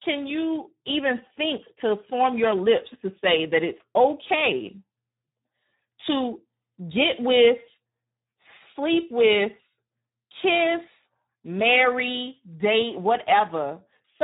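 Hoarse, noisy and somewhat robotic throughout, with nothing above 3.8 kHz: heavy Speex codec damage, a starved CELP excitation consistent with roughly 8 kbps.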